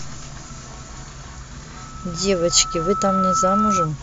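From 1.76 to 3.90 s, loudspeaker feedback squeal: the loop gain exceeds one at 1.3 kHz, and the tone swells over about a second and a half to sit above the speech.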